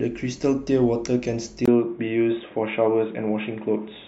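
At 1.66 s, a 20 ms gap. Then the speech turns dull, with nothing above 3.8 kHz. Likely an input switched to a poorer device.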